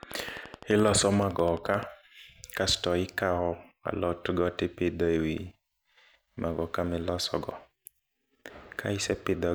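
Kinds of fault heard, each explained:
Train of clicks: a run of near-identical impulses added on top of the speech at a steady rate of about 11.7 per second, from 0.03 s to 1.84 s, roughly twenty clicks in all. Each one peaks a few decibels above the speech itself, so the ticking stands out clearly and carries through the gaps between phrases. The even spacing and uniform shape most likely point to periodic interference from nearby equipment or a faulty connection or power supply.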